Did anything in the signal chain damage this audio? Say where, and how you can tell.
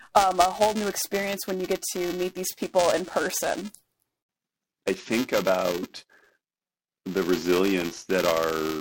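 Yes, there is buffer tearing at the driver or buffer stage, throughout the speech. A rattling buzz near 375 Hz rides on the voice and drops out in pauses, which fits a 128-sample buffer. A small slice of each period replays audio about 10 ms old. The spectrogram shows vertical striping repeating 375 times a second, and the waveform shows a hard step every period.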